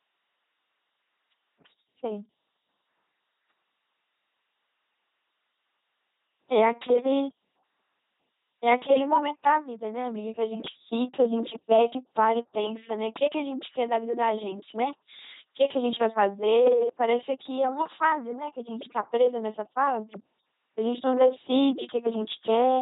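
LPC-10 vocoder damage runs throughout the speech. A ten-pole vocal tract filter is driven by either a pulse train or noise at 2.4 kbit/s, with each moment treated as fully voiced or unvoiced. The result is heavy buzzing, a robotic tone, and nothing above 3.8 kHz.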